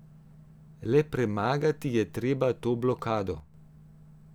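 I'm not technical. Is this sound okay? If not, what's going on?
No, not quite. From about 3.40 to 3.54 seconds the speech suddenly gets noticeably quieter for a moment, then snaps back. That's most likely one channel dropping out: one side of the stereo recording briefly goes missing, so the combined sound loses part of its strength.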